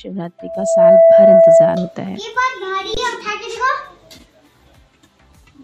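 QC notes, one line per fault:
0.38–1.99 s, loudspeaker feedback squeal: microphone picked up its own loudspeaker with loop gain above one at 662 Hz, so that tone swells within half a second to roughly 15 dB over the sound.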